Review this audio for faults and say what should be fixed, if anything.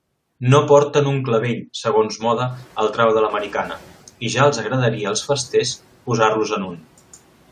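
Right after "porten un clavell segons", the noise suppressor is catching up from 2.19 to 3.91 s. The room noise jumps by about 20 dB around the 2 s mark, to roughly 26 dB below the speech, and the suppressor's noise estimate still reflects the quieter floor, so the louder background passes with little reduction. Over about 1.72 s the estimate adapts and the noise sinks by about 6 dB. To prevent this, shorten the noise estimator's adaptation time for rising noise levels so the floor is tracked within a few hundred milliseconds.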